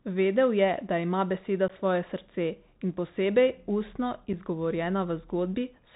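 Across the whole speech clip the sound is band-limited and gritty, with scratchy s sounds and a granular hiss beneath. This is the Bluetooth CVSD headset codec, which fits a 64 kbps link: a one-bit, adaptive-step coder that cuts everything above 4 kHz and lags behind fast, loud changes.

At 1.68 to 1.71 s a brief hole with abrupt edges interrupts the speech, and the level dips as it resumes. Again at 4.33 s a shorter gap follows. This is unconcealed Bluetooth headset packet loss: about 15 ms, roughly a couple of packets, and then 7.5 ms, about one packet, were dropped and replaced with silence or an idle pattern.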